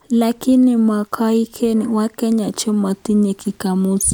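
No technical faults can be heard anywhere in the recording. There is nothing in it to place on a timeline.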